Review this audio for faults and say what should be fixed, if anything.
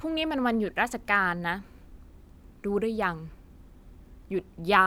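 Nothing stood out on listening to this speech clip, so there is nothing that needs fixing.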